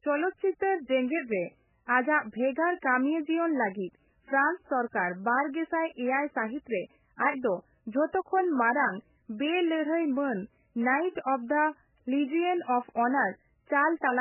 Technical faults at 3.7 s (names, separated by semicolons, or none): MP3 compression